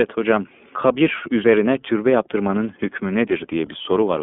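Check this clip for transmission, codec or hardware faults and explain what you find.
The speech has been through the iLBC codec for its whole length. It sounds plainly rough and slightly synthetic, with nothing above about 3.7 kHz. iLBC codes each 30 ms frame's excitation independently, which fits its 13.33 kbps mode, over a 200 to 3500 Hz telephone band.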